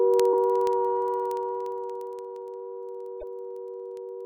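From 0.14 s to the end, the sound carries word clock ticks: sharp clicks of uneven strength at a steady rate of about one every twentieth of a second, around seventy in all. The receiving device is running on its own clock rather than locking to the sender's, and the timing suggests a mismatch of roughly 400 parts per million. Each time the two clocks slip by a full sample, one sample is dropped or repeated. The metronomic regularity sets these apart from random dropout clicks or vinyl crackle.

At 0.33 s a brief blip cuts in. A second, longer disturbance runs from 3.18 to 3.23 s. Both are damaged data in a compressed stream: corrupted bytes leave the decoder unable to parse the affected frames, so it loses sync and skips ahead to the next valid header. Unlike the clock ticks, these are isolated and irregular.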